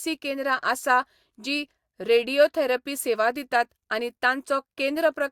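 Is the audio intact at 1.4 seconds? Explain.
Yes, the speech at 1.4 seconds is intact, with no dropout, distortion or other fault at that moment.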